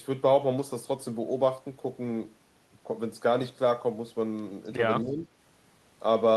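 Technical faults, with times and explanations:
5.02 to 5.27 s, speech suppressed in double talk: the speech sinks by roughly 10 dB for that quarter second and comes back afterwards. Most likely the echo canceller heard both ends talking at once, couldn't separate this talker from loudspeaker echo, and turned everything down.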